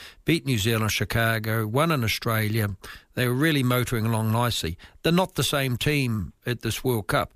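No technical faults can be heard anywhere in the recording of speech, so there is nothing to place in time and no cause to explain.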